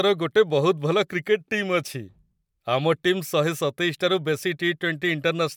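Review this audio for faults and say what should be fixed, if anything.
No faults; nothing to fix.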